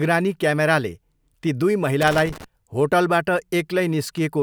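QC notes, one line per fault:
2.01–2.44 s, loose connector crackle, just after "ती दुई". An irregular burst of scratching and crackle lasts about 0.43 s. A worn or dirty contact is making and breaking as it shifts. This chops the speech signal, and any DC on the line adds pops.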